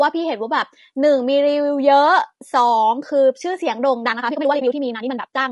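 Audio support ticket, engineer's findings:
Low-delay AAC compression, whole clip: likely an AAC-ELD encode with a low-delay window coding about 500 frequency lines a frame, starved at a rate that fits about 32 kbps. Speech comes out rough and grainy, with noise filling the gaps between harmonics and a dull, synthetic-sounding top band. Damage is plainly audible throughout.

Time-stretched section, 4.02 s to end: likely a length-fitting stretch that sped the tail up about 1.98 times, holding pitch by discarding short segments. Pace jumps abruptly at 4.02 s while pitch stays put. Delivery turns rushed.

AAC frame loss with muting, 4.59 to 4.62 s: the decoder zeroed the spectrum for what sounds like a single lost frame of about 20 ms. Overlapping windows fade the signal down and back up, leaving a brief dip, inside the already sped-up section.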